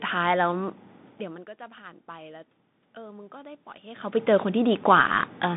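From start to finish the speech sounds boxed-in and narrow, with a granular hiss under it, scratchy s sounds, and grit on the louder passages. Nothing reaches above about 3.8 kHz, and the low end thins below about 150 Hz. This is the Bluetooth CVSD headset codec. It encodes each sample as a single up-or-down step, which fits a 64 kbit/s stream. Loud high-frequency energy changes faster than the adaptive step can follow, so the damage is plainly audible.

Between 0.57 and 5.16 s the level climbs slowly, and the voice and the room noise swell together. The gain ends about 7 dB higher. This is automatic gain rising. The input had fallen by about 20 dB, and the talker's distance from the microphone changed at around 1 s and again near 4 s. The gain control then raised its gain gradually to compensate. It did not make up the whole loss, so the rise is heard as a slow swell across the clip.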